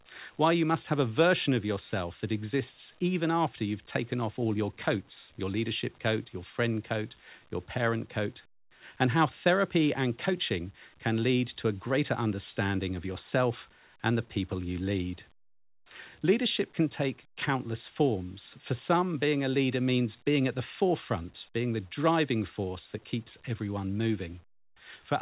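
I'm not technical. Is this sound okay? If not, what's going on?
Yes, nothing stood out on listening to this speech. It sounds like a normal phone call, with the sound carried over a WebRTC call path and nothing heard above about 4 kHz.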